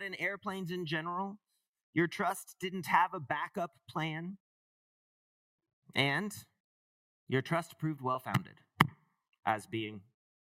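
Nothing in the audio stood out as a fault on listening.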